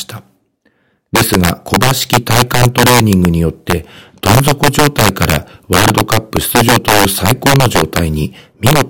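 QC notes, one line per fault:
Throughout: integer overflow. The speech peaks are driven about 8 dB past full scale, and instead of being limited they wrap around to the opposite extreme, so each loud moment breaks into a violent crack far harsher than clipping. Only a small share of samples, around 3 percent, cross the limit. On the waveform the peaks jump from top rail to bottom rail in vertical spikes, and on the spectrogram they show as full-band vertical streaks.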